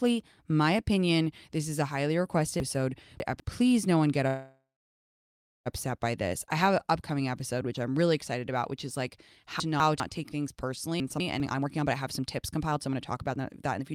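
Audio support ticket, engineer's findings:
Jumbled moments at 2.6–3.4 s, 9.6–10.0 s (after "about which is like") and 11.0–11.4 s (after "take things"): chunks out of order. A 200 ms block plays late, by three blocks at 2.6 s and one elsewhere. Hard joins at each splice.

Sound stops at 4.27 s, with the last sound drawn out and fading, then about 1.03 s of silence, resuming at 5.68 s with nothing lost. Call audio freeze, likely from delayed packets draining the jitter buffer. A 1.38 s gap is inserted and the delay grows by 1.38 s.

Hurried delivery from 10.89 s to 13.94 s, after "take things", with pitch unchanged, at 123% speed. Jitter buffer speed-up: the receiver trims short pitch-period pieces repeatedly to shed excess buffered delay, around 0.7 s in total.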